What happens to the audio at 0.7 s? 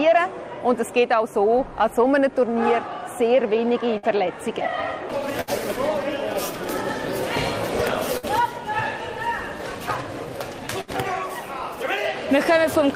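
Nothing goes wrong at 0.7 s; the audio plays through that moment intact, with no dropout, click or other audible fault.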